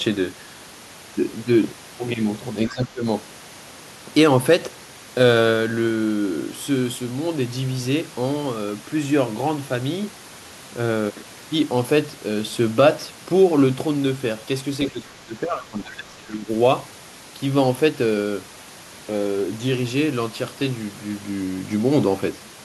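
From 2.68 to 3.05 s the speech is suppressed in double talk, likely an echo canceller ducking the talker while the far end spoke. The level dips by about 15 dB, visible as a notch in the waveform envelope. At 2.69 to 2.74 s the other side's voice leaks through, a faint scrap about 20 dB below the speech. From 14.9 to 16.49 s the same double-talk suppression returns, with a longer drop of around 15 dB.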